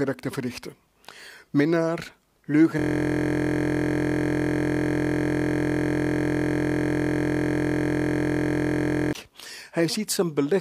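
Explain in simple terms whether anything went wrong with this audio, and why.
Something did go wrong. From 2.79 s to 9.13 s the audio turns into a steady buzz. This is a system hang loop: the computer or its audio driver froze, but the sound hardware kept replaying the last chunk of audio it had been given. That chunk is only about 23 ms long, which fits a 1024-sample buffer, so it repeats about 43 times per second. That rapid repetition is what you hear as a continuous buzz instead of sound.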